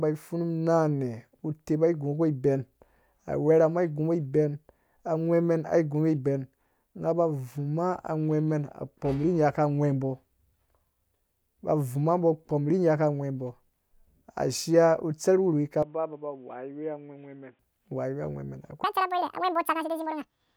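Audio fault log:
15.83–17.59 s, input switched to a poorer device: right after "utserh wurhuwi" the speech turns boxy and narrower, about 10 dB quieter over fresh background noise. Likely a mic swap, with no gap.
18.84–20.57 s, section at the wrong speed: the speech runs 1.93 times too fast, about ten semitones higher and hurried to the end, likely played against the wrong clock.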